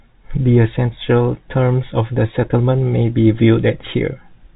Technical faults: none

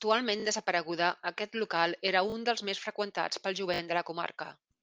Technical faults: repeated buffer

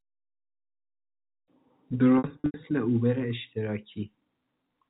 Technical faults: packet loss with pitch repetition

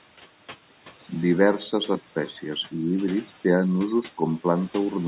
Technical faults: noise suppressor artifacts

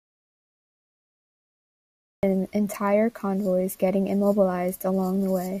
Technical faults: audio dropout to silence

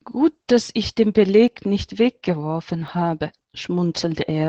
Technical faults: Opus voice compression; dropped buffer (overrun)

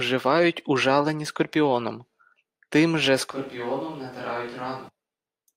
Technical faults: switch to a distant microphone

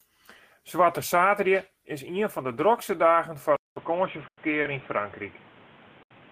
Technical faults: input switched to a poorer device; call audio freeze; short stall from a late packet

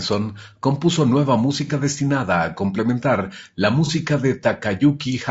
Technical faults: low-delay AAC compression; AAC frame loss with concealment

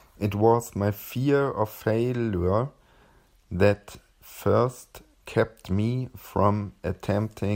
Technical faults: lost LE Audio frames

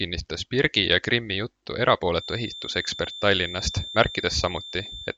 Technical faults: feedback whistle

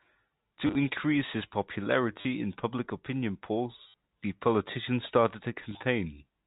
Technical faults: packet loss with last packet repeated

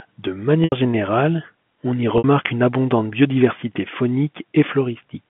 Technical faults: packet loss with pitch repetition

